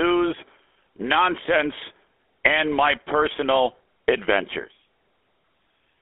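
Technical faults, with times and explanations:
Throughout, GSM full-rate codec. The speech has a plainly audible buzzy, gravelly roughness. This codec models the vocal tract as a filter. It drives that filter with evenly spaced pulses and keeps only every third sample of that excitation, so fine detail is lost. The sound fits the 13 kbps GSM full-rate coder. The band is also narrow, running from about 300 Hz to 3.5 kHz, as on a telephone line. That takes away the low warmth and the upper air.
4.62 to 4.65 s, lost GSM frames. A brief, rough, metallic ring replaces the speech here. The decoder had no good data for this stretch. It repeated the settings of the last good frame instead. The length points to a single lost 20 ms frame. Because the loss is so short, the ring is quick. It does not fade down or cut to silence. Normal decoding then resumes.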